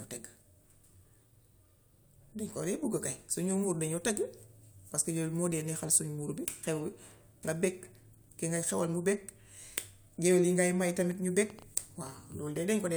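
In this speech recording, something, likely nearby interfering equipment or a faulty connection or power supply, injects repeated pulses, producing a train of clicks from 11.11 to 12.58 s: about seven similar pops at around 3.4 per second, unevenly spaced and roughly as loud as the speech itself.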